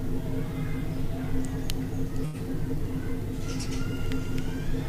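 At 2.25 s there is a short stall from a late packet, lasting until about 2.36 s. A packet missed its playout time and the jitter buffer ran dry. The receiver filled the gap by stretching the last sound for about 85 ms. When the packet arrived, playback resumed from the same point. Nothing is lost. The sound simply hangs a little too long, with a faint buzz or dip, and everything after it runs about 85 ms later.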